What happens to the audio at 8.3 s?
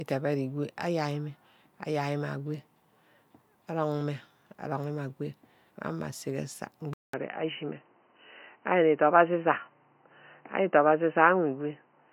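At 8.3 s the speech sounds dull and boxy, with nothing above 3 kHz, a level shift of about 5 dB and a faint new noise floor. This runs from 6.94 s to the end, after a 200 ms gap. The likely cause is the input switching to a poorer device.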